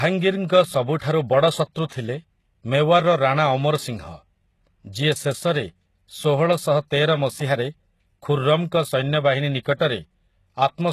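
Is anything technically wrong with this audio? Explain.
Yes, two faults are audible in this speech clip.

HE-AAC compression, heard throughout, is the likely cause of the sound. The treble is rebuilt by copying lower bands upward under a coarse envelope, so its harmonics no longer line up. Nothing is present above 12.3 kHz, and the damage is plainly audible, which points to a low bitrate around 16 kbps. S sounds come out gritty and lispy.

Pre-echo appears at 0.48 s, spread over 18 ms, and again from 9.77 to 9.80 s, spread over 33 ms. Quantisation noise sized for a sharp attack spreads across the codec block into the quiet just before it, so each attack is preceded by a brief hiss and sounds smeared.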